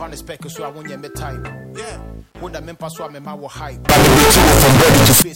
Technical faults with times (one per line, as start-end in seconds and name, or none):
3.89-5.22 signed and unsigned mixed up